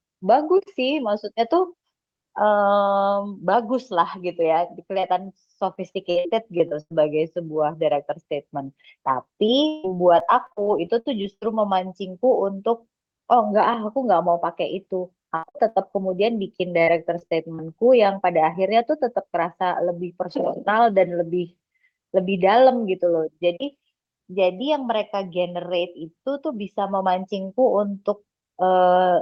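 Repeated packet loss (robotic sound) breaks up the speech four times: 4.99–6.92 s, 9.46–11.55 s, 15.36–15.78 s and 16.83–17.60 s. Packets went missing in quick succession, and each hole was patched by stretching out the preceding sound, which leaves the speech choppy. On a spectrogram, the harmonics smear into flat horizontal bands across gaps of up to 0.16 s. The waveform shows oddly regular repeated cycles where the concealment filled in.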